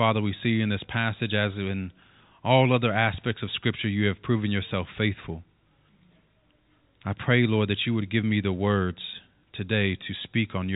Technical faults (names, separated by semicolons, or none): none